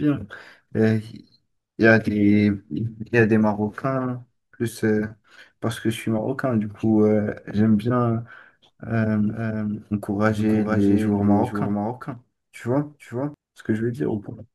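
From 9.28 to 13.34 s the speech gains a second copy about half a second behind, roughly 5 dB quieter, dry and switching abruptly; likely a doubled audio track.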